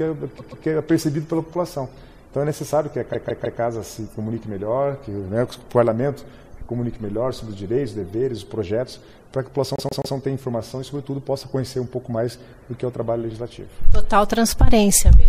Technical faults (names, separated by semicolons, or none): repeated frames